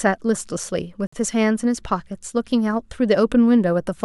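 At 1.07 s the speech drops into a hard-edged hole of silence lasting about 55 ms, to 1.13 s. This is a gap between stream segments: the time stamps of consecutive 1-second segments don't meet, so the player pads the join with silence while losing no audio.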